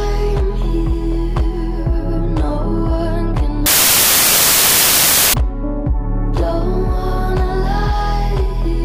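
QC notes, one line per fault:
3.66 to 5.34 s, samples built from the wrong bytes. For about 1.7 s the sound gives way to loud, harsh broadband noise. The reader has put the bytes of each sample together wrongly. It may be off by a byte, or it may have the byte order reversed. The low bits change from sample to sample, and here they form the top of each value. The result is loud random noise that shows little of the original.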